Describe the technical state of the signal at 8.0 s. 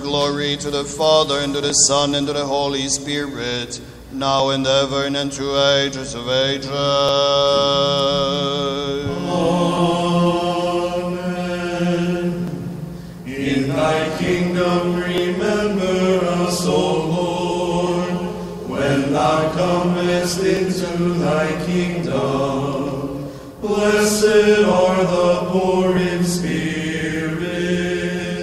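A click or pop recurs at a steady beat of one every 2.69 s, and 8.0 s falls inside that run, which lasts from 1.7 s to about 25.97 s and gives roughly ten clicks in all. The likely cause is clock drift buffer slips: two devices on separate clocks disagree by a few hundred parts per million, so the buffer between them drifts until a short block of a few dozen samples is dropped or repeated, leaving a discontinuity each time.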